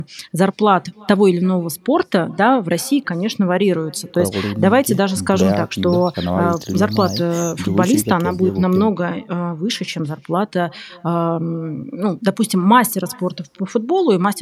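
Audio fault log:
throughout: echo with no canceller. Each stretch of speech returns as a faint, thin copy around a third of a second later, sitting about 28 dB below the direct voice. The far end is playing the call through a loudspeaker, its microphone hears that playback, and no echo cancellation subtracts it. The captured copy then travels back across the network, so the round-trip delay sets the lag and the room and speaker colour the returned sound.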